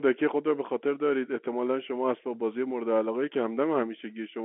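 Nothing stood out on listening to this speech recording, which comes through a telephone line band that stops short of about 3.8 kHz.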